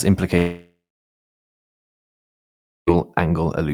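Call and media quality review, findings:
Long network dropout, 0.37 to 2.89 s: fading buzz, then about 2.1 s silence, a blank spectrogram gap. Likely packet loss outlasting concealment; 2.5 s lost.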